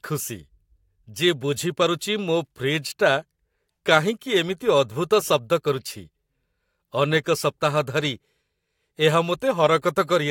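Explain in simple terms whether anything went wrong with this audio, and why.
Nothing went wrong here; the speech has no audible faults.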